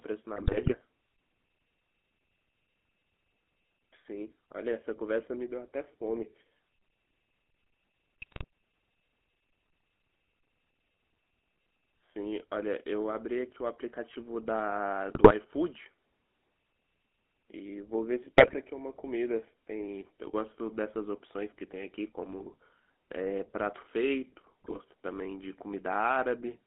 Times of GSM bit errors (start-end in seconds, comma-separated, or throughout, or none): 0.36-0.76, 8.22-8.44, 15.10-15.32, 18.37-18.55, 22.39-22.56, 24.64-24.81